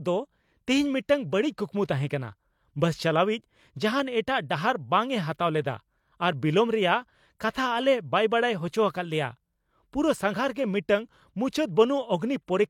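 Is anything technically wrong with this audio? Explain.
Yes, there's a pre-echo from about 10.54 to 10.56 s, right after "ᱯᱩᱨᱟᱹ ᱥᱟᱸᱜᱷᱟᱨ". A transform codec handles audio in blocks and spreads its quantisation noise across the whole block. Here a sharp attack lands late in one, so noise meant to be masked by the loud onset leaks into the quiet stretch before it, smeared over roughly 20 ms. You hear a short hiss just ahead of the attack, which itself comes across softened.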